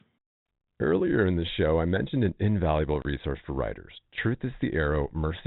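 Around 3.02 s there's a short drop-out, packet loss filled with silence, running to 3.05 s. About 30 ms of the speech just vanishes: packets never arrived, and the receiver played dead air in their place instead of trying to patch the gap. That length fits three 10 ms packets going missing together. You hear it as a quick hole with hard edges, over the telephone-band G.711 sound.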